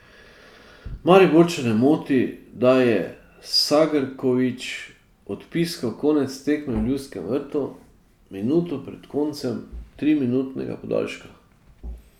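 No technical faults can be heard anywhere in the recording, and the signal stays continuous and steady throughout.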